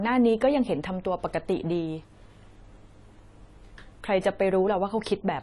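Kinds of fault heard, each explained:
AAC compression: a likely low-bitrate AAC-LC encode, consistent with about 32 kbps, removes everything above 11.4 kHz, leaving the speech dull and plainly smeared throughout.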